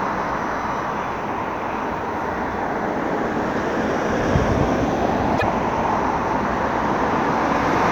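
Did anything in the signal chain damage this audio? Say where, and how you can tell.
Yes. At about 5.34 to 5.43 s, damaged data in a compressed stream breaks the sound for about 80 ms. The fault sits at the codec stage, in the stored or transmitted compressed file: corrupted bytes there leave the decoder unable to parse its frames. It loses sync, emits garbage briefly, then skips forward to the next valid frame header and resumes normal decoding.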